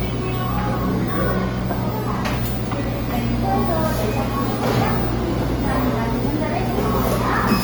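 Throughout the clip the sound has a rough, grainy texture: tonal parts come across noisy rather than clean, while the top end still reaches about 20.3 kHz. This points to Opus compression, likely in its CELT music mode at a low rate, which fits about 24 kbps. Short of bits, the encoder keeps each band's energy but fills the band's contents with folded or noise-like material, giving plainly audible damage.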